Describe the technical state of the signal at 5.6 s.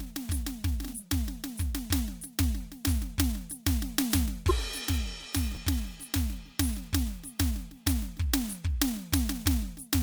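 Right around 5.55 s there's a chunks-out-of-order glitch: one 5.8 ms slice of the music lands two chunks late, giving a tiny jumbled stutter.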